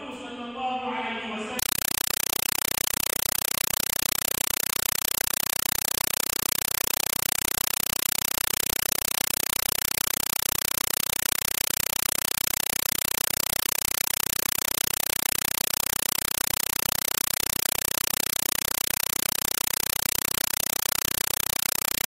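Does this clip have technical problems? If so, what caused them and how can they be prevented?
Yes. From 1.59 s to the end, a compressed stream played as audio replaces the sound with very loud static. An undecoded AC-3 bitstream, which fits about 256 kbps, is being read as raw samples. Unlike steady hiss or broadband noise, it chatters at 31.25 Hz, because each 5.33 ms noise burst is followed by silent padding. To prevent it, set the receiving device to decode Dolby Digital, or have the source output PCM.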